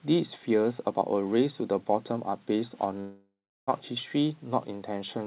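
At 3.0 s the speech breaks off and does not resume until about 3.69 s, a gap of roughly 0.68 s that sounds like a long network dropout, with the likely cause being lost packets. The receiver stretches the last sound into a fading buzz before about 0.36 s of silence. On a spectrogram the harmonics smear into flat, decaying bands, already capped at 4 kHz by the narrowband call path, then go blank; the waveform shrinks to a flat line before speech returns.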